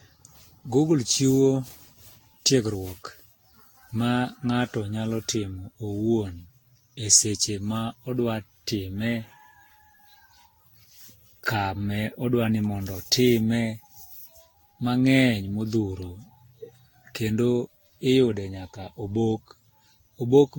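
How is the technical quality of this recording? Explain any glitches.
The speech has a swirly, hollow, smeared quality throughout the whole recording. Consonant attacks blur. This points to generation loss, most likely from repeated lossy coding. The sound fits being decoded and re-encoded around ten times with Vorbis at roughly 60-odd kbit/s. Each new pass requantises the signal on a shifted frame grid, so noise and spectral holes pile up beyond what one encode at that rate would leave.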